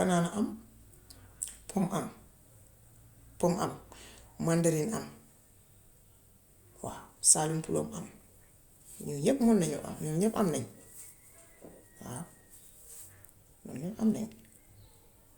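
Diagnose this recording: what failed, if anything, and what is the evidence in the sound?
Nothing stood out on listening to this speech recording that would point to a failure at any stage of the chain.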